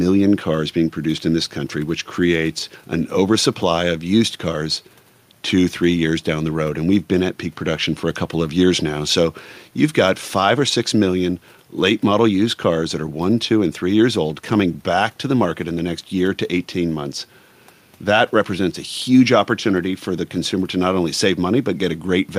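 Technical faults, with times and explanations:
No technical faults detected.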